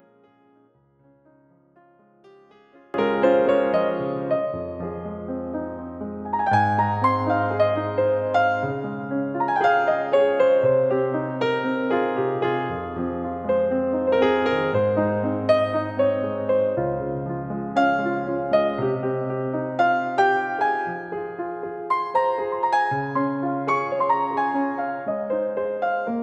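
From the start of the clip to 2.94 s, one channel of the stereo pair has most likely been inverted, its polarity flipped relative to the other. When the two are summed to mono, everything they share cancels, and the level drops by about 30 dB. Centred material and low end all but disappear, leaving only a faint residue made of whatever differed between the channels, until normal polarity returns at 2.94 s.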